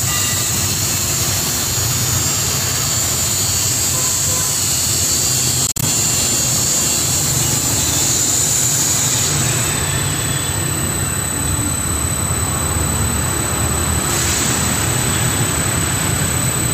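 A Bluetooth dropout breaks up the sound between 5.67 and 5.84 s: several short silent gaps, about 91 ms lost in total and the longest about 46 ms. Audio packets likely reached the headphones too late and were discarded, and playback resumes where it would have been.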